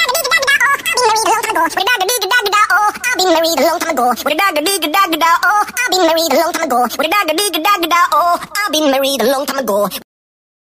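At 5.43 s the audio jumps into a section at the wrong speed and stays there to the end, running 1.25 times too fast. Everything turns hurried and sits about four semitones higher, likely from a player or edit running on the wrong clock.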